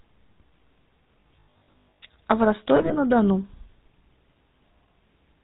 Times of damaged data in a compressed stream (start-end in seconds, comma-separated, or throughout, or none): none